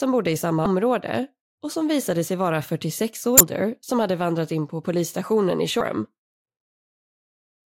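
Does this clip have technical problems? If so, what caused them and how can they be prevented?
Yes. Damaged data in a compressed stream at 0.63–0.66 s after "bodde i", at 3.37–3.41 s before "som hade vandrat in", and at 5.78–5.81 s after "in på polisstationen i": corrupted bytes make the decoder misread frames and lose sync, producing brief blips. Verify transfers with checksums and keep metadata out of the audio stream to prevent it.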